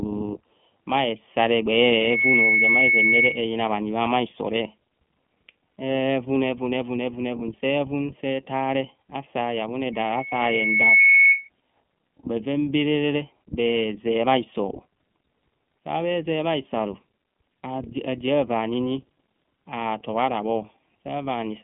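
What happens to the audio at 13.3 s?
Two faults are active at 13.3 s, and neither is confined to that moment; both run through the whole clip.

The first is a channel delay producing comb filtering. One channel reaches the mono sum roughly a third of a millisecond after the other, so components common to both cancel at evenly spaced frequencies, the lowest notch sitting around 1.5 kHz with further notches repeating above it. The speech at 13.3 s sounds hollow and phasey, as if heard through a tube, with a fixed dull hole in the mid range that doesn't move as the speech changes.

The second is the iLBC codec. The speech has been squeezed through a narrowband VoIP coder that treats each short frame of excitation independently, consistent with 20 ms frames at a 15.2 kbps mode. Everything above about 3.6 kHz is gone and the low end starts near 150 Hz, giving a boxed-in telephone band. The coding damage is plainly audible, leaving the speech intelligible but rough, grainy and slightly synthetic.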